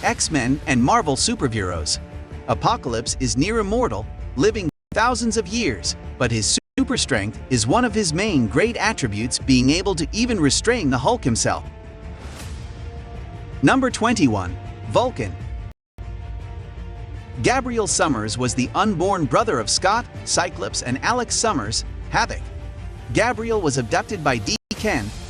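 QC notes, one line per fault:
4.69–4.93 s, 6.58–6.79 s, 15.72–15.99 s, 24.56–24.72 s: Bluetooth stall, four times. The sound drops to silence for 227 ms, 193 ms, 269 ms and 150 ms, then resumes. No fade marks the edges. The audio just stops and restarts. The likely cause is radio interference delaying packets, so the headphones' buffer ran empty. Playback then waited for the resent data before carrying on.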